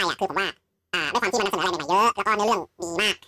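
From the first moment to the last, the speech runs at twice its natural speed. It is a wrong sample rate fault. The samples are read out faster than they were captured, with no rate conversion in between. Pitch and tempo rise together by the same factor. Here that is an octave, 12 semitones up. The voice sounds thin, squeaky and rushed. The doubling fits 16 kHz audio being played back at 32 kHz.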